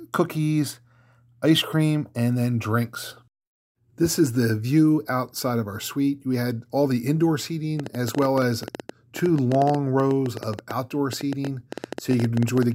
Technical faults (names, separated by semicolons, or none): train of clicks